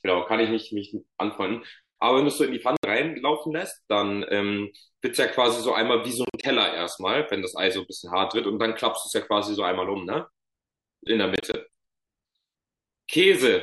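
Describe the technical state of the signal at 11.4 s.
Around 11.4 s, brief silent holes punch through the speech between 11.36 and 11.56 s, most likely a Bluetooth dropout. About 70 ms goes missing in short gaps, the longest 23 ms. The speech skips ahead rather than pausing and resuming where it stopped.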